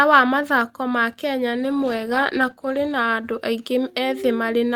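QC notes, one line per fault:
1.55–4.05 s, call bitrate drop: the call's bandwidth estimate fell and the encoder was forced to code the speech far more coarsely, consistent with a fall from roughly 40 to 18 kbps. The speech turns rough and watery, worst for about 1.4 s, before quality recovers.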